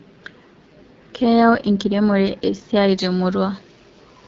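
From the start, the whole speech clip passes through the AMR wideband (HD Voice) codec and is damaged by it. Below about 6.4 kHz the voice is rebuilt from a pulse-excited vocal tract model, and the band up to 7 kHz is filled with shaped noise. The harsh, raspy texture points to one of the two lowest modes, which fits 8.85 kbit/s. Unlike narrowband telephone coding, the audio keeps air up to 7 kHz, but that top band sounds hissy rather than detailed.

From 2.89 s to the end at 4.27 s, pre-emphasis is left on. The treble boost follows a 75 µs curve and was never cancelled by the matching de-emphasis. Highs sit about 13 dB above 1 kHz at 10 kHz, so this section sounds suddenly thin, bright and spitty. A narrow sibilance peak or a harsh EQ bump would stand out at particular frequencies. This boost is a smooth, steadily rising tilt that lifts the whole upper range.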